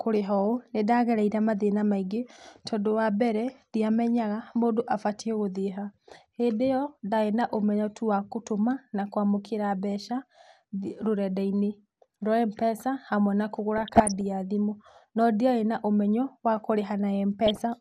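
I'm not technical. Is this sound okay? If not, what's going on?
No, not quite. The whole recording sounds plainly dull and gurgly, as if the top end has been shaved off. That's most likely MP2 compression, the squeezing used for digital radio, which drops detail it can't afford to keep.

On top of that there's DAB burbling, a bubbling, blipping noise from garbled reception data, from 13.76 to 14.26 s, right after "hamwe na" and before "ya thimũ no", and again briefly from 17.47 to 17.60 s.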